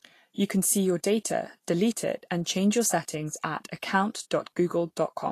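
From start to finish the speech sounds hissy and grainy, with nothing above 14.2 kHz. That's most likely Vorbis compression at a low setting, around 37 kbps: the treble gets quantised so coarsely that fine detail turns into noise, roughening tones and smearing consonant attacks.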